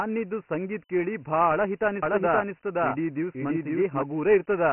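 From start to finish the speech has been squeezed through Dialogic VOX ADPCM, the 4-bit telephony coding used for phone menus and voicemail. Nothing is left above 3 kHz, which fits a 6,000-sample rate at about 24 kbps. Because each sample stores only a coarse step from the last, the encoder lags behind fast changes. The damage is heavy: the speech is boxed in and muffled, and a gritty hiss clings to every syllable.

From 2.03 s to 4.03 s a doubled audio track appears. A second full-band copy of the speech runs about half a second behind and roughly as loud as the original. This is likely from a slower second capture path or an edit that left two copies out of step. The echo is dry, with no decay or room colour. It switches on and off abruptly, and for those two seconds the speech sounds stacked over itself.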